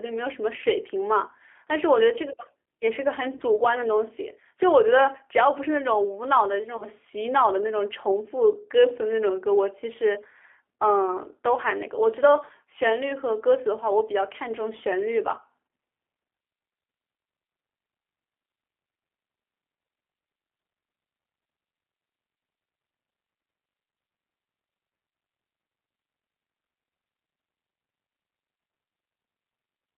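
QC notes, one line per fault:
throughout: G.729 codec. The audio passed through a low-rate predictive speech coder that rebuilds the voice from a vocal tract filter, a pitch predictor and a few pulses per frame. Its roughness fits an 8 kbit/s G.729A stream. Only the 300 Hz to 3.4 kHz telephone band survives, so the speech sounds thin and boxy, and the coarse pulse excitation gives it a plainly audible rough, slightly synthetic edge.
3.37–3.43 s and 6.77–6.85 s: VoIP packet loss concealed by the speech codec. At each point about 30 ms of audio went missing, which fits a single dropped packet. The decoder filled the gap by extending its last pitch and filter settings with falling gain, so the speech is briefly stretched into a buzzy tone or coloured noise that fades. Each frame depends on the one before, so the sound stays weak and smeared until about 3.43 s and 6.85 s, past the 30 ms gap.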